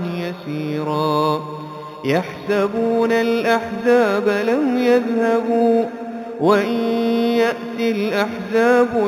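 Throughout, a faint metallic shimmer sits at 4 to 8 kHz, about 25 dB down. This is imaging from linear upsampling, consistent with 8 kHz audio raised to 48 kHz.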